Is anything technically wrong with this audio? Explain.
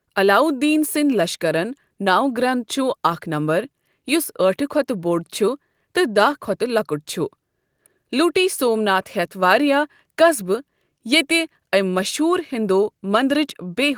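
No, nothing technically wrong can be heard anywhere in this speech recording.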